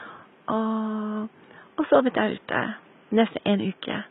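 Throughout the speech, the treble sounds synthetic: s sounds come out gritty and lisping, with a metallic sheen over the upper band, and the damage is heavy. This is likely HE-AAC compression, consistent with a very low bitrate around 16 kbps. Only the lower spectrum is coded; the upper band is rebuilt by copying lower bands upward. On a spectrogram the treble appears as a repeated, blocky copy of the lower harmonics, misaligned across a sharp crossover. The room noise, about 31 dB below the speech, sits faintly beneath this.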